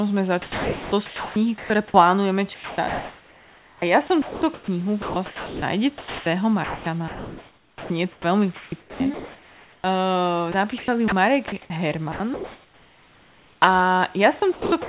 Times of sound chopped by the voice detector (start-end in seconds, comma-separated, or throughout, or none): 0.42-1.94, 2.54-9.84, 10.52-13.62, 14.40-14.89